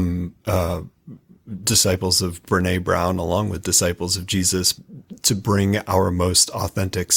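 The player began this speech on a low-bitrate rendition of an adaptive stream, which fits roughly Opus at 24 kbit/s, before switching up, consistent with 64 kbit/s. From 0.0 to 2.0 s the treble is thin and codec artefacts are stronger, then quality improves suddenly without a gap.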